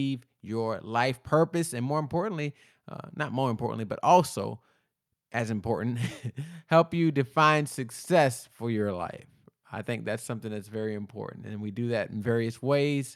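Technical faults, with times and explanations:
No technical faults can be heard in this speech clip, so there are no times or explanations to give.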